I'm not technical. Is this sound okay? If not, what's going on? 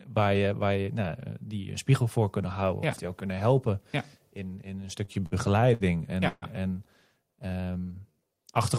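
No. Right after "helpen in in een", from 5.05 to 5.83 s, the speech catches five times in quick succession. These are repeated stalls (stutter): data arrived late, so the phone briefly stretched the last sound each time, never longer than 60 ms.

At 6.28 to 6.45 s the sound hangs for a moment and then briefly goes silent. This is a call audio freeze, likely caused by data held up on the network, which added a pause of about 0.14 s.

From 7.30 to 8.35 s the speech drags, running at about 87% speed with the pitch unchanged. This jitter buffer slow-down is the receiver stretching the sound to rebuild its reserve.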